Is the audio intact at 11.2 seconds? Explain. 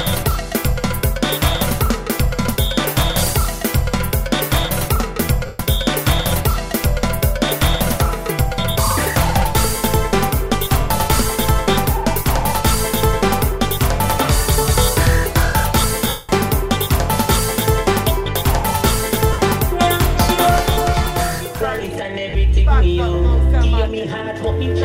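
Yes, at 11.2 seconds the audio plays through cleanly, with no dropout, click, distortion or other fault.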